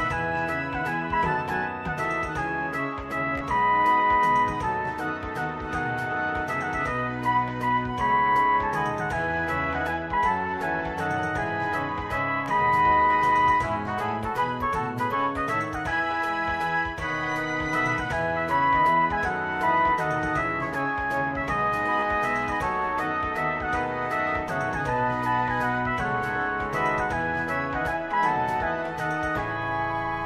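Bluetooth stutter strikes three times, from 3.38 to 3.41 s, at 12.46 s, and from 22.00 to 22.03 s. Each time the wireless link dropped or delayed data, so the receiver replayed its last chunk of audio to fill the gap. About 29 ms goes missing at 3.38 and 22.00 s, heard as a short buzzy double-repeat that fits two lost packets. The 12.46 s event loses 14.5 ms, a single quick repeat. Afterward the sound jumps ahead as if it had played on.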